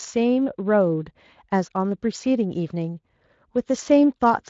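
Speech over a Speex-coded path, with content stopping near 7.6 kHz as that wideband mode implies, and no faults to report.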